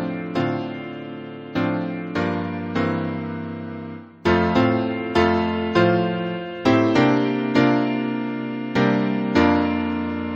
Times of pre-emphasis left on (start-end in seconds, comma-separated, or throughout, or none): none